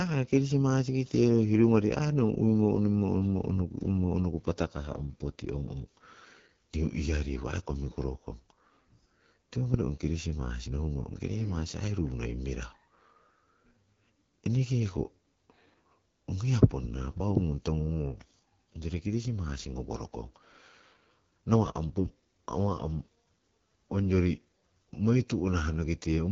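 The AMR wideband (HD Voice) codec is heard across the whole speech clip. Its rough, raspy texture points to one of the codec's two lowest rates, around 8.85 kbit/s, too few bits for the pulse-driven vocal tract model. Nothing sounds above 7.1 kHz, and the top band is shaped noise.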